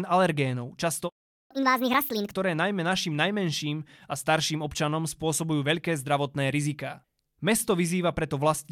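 At 1.09 s, right after "alergénov často", the speech cuts to silence for about 0.41 s. This playback stall is likely the player running out of buffered data.

From 1.51 s to 2.33 s comes a catch-up at higher speed: the backlog plays at 1.5x, pitch rises by roughly seven semitones, and normal rate returns before "najmä našim najmenším a".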